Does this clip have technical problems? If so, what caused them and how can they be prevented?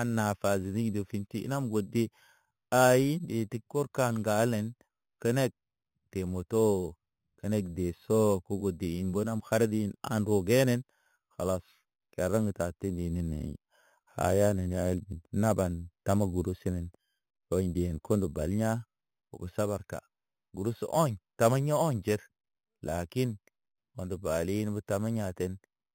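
Yes. Throughout the speech there is imaging from sample-and-hold upsampling. The audio was raised from 8 kHz to 44.1 kHz by repeating each sample with no smoothing. This folds mirror copies of the spectrum upward, the first lying between 4 kHz and 8 kHz at about 19 dB below the signal. It is heard as a bright metallic fizz that rises and falls with the speech. Prevent it by upsampling with a proper interpolation low-pass filter rather than sample repetition.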